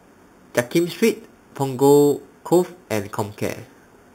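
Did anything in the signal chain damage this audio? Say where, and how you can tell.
Yes. The damage happened at sample-rate conversion, and it lasts the whole clip: imaging from sample-and-hold upsampling. A bright metallic fizz sits between 4 kHz and 8 kHz, about 19 dB below the speech. That fits an 8 kHz source raised to 48 kHz by repeating each sample without a smoothing filter. The fizz is mirrored speech, so its level rises and falls with the speech. As the voice pitch rises, the lowest copy falls. Steady noise or codec hiss would not follow the pitch in reverse like that.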